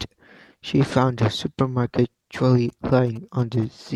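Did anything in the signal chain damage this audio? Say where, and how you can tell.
Yes. GSM signalling bursts enter the analogue wiring from 2.69 to 3.88 s. Galloping ticks and buzzes at 216.7 Hz, roughly 25 dB below the speech, are a nearby phone's radio bursts rectified by the circuit.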